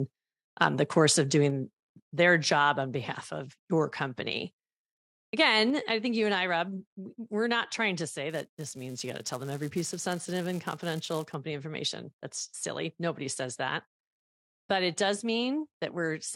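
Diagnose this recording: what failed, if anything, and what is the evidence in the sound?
Microphone overload at 0.61 to 0.66 s: the loudest part of the speech gains a brief harsh, crackling edge where the peaks are flattened. This points to the converter stage. The input volume was likely set high enough that the waveform ran about 2 dB past full scale. A small fraction of samples hit the ceiling and had their tops sheared off, and that sheared shape is what adds the rough distortion.

Microphone volume stepped down at 1.5 s, 2.52 s and 5.7 s: voice and background both drop abruptly in level, by about 3 dB, about 2 dB and about 3 dB respectively. The first drop follows shortly after the distorted peak at 0.61 s. This fits call processing that reacted to the overload and likely lowered the device's input volume in discrete steps rather than ramping it, which is why each change is sudden rather than gradual.

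Filter restarted on every block from 8.3 to 11.3 s: a steady 375 Hz buzz rides on the speech, louder where the signal is louder. This sits in the driver or buffer stage. A filter is being reset to silence at the start of each processing block, so each block opens with a small transient. Those transients repeat at the block rate, and 375 Hz fits a 128-sample block at 48 kHz.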